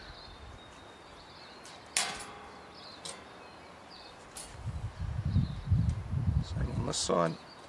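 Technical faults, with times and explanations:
Nothing technical stands out here; the audio comes across without any dropouts, glitches or other problems to point to.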